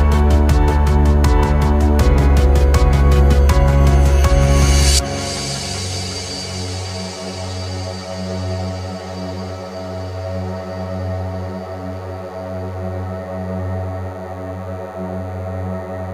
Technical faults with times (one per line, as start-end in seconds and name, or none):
0.00-16.13 DECT cordless phone buzz